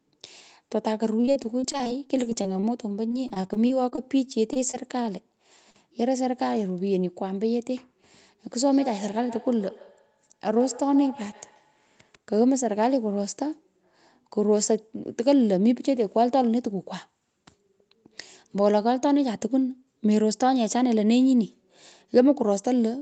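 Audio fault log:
1.21 to 5.06 s, repeated packet loss (robotic sound): About thirty separate holes fall in this stretch, the longest around 40 ms, with about 440 ms of sound missing in total. Each hole is bridged by extending the sound just before it, so about 14% of the span is synthetic fill. Because the next dropout arrives before the patched sound settles, the speech turns choppy and mechanical, with a robotic edge and fragments gone.
5.70 to 5.76 s, short concealed packet loss: A single dropout of about 40 ms. The receiver covered it with roughly 38 ms of invented sound, continuing the pitch of the preceding voiced sound or shaped noise if it was unvoiced, then crossfading back into the real signal. The result is a brief smear or wobble at that instant, and any short consonant falling inside the hole can disappear entirely.
8.60 to 12.14 s, feedback echo between two devices: A second device in the same room is playing the call back, and the first microphone recaptures it. 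Neither device's echo canceller removes the other device's playback, so the sound circulates and returns at a regular interval of roughly 150 ms. The strongest repeat sits about 18 dB below the direct speech, and each pass comes back thinner and more ringing than the last.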